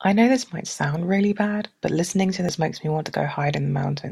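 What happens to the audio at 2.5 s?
A brief chirp or blip cuts through the speech at 2.49 s, caused by damaged data in the compressed stream, where the decoder misreads corrupted frames and resynchronises.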